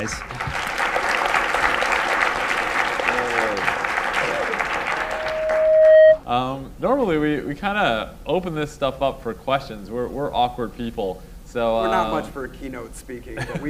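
From 4.89 s to 6.20 s a pure tone at 628 Hz swells over about a second into a piercing squeal, ending up around 15 dB louder than the surrounding sound. This is loudspeaker feedback squeal: the microphone picked up its own loudspeaker, and loop gain above one at that frequency let the tone build on itself.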